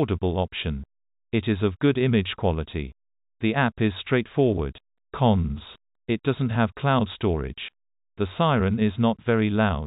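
No technical faults can be heard in the speech. It has the narrow telephone sound of G.711 coding, with nothing above 4 kHz and only a faint hiss that rises and falls with the level.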